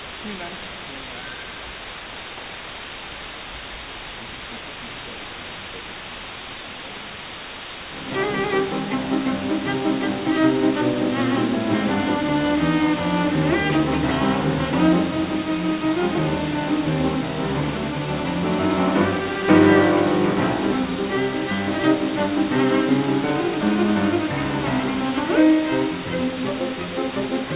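From start to finish, low bit depth with dither, consistent with about 5-bit quantization, leaves a constant, even hiss nearly as loud as the sound, which stops at 4 kHz.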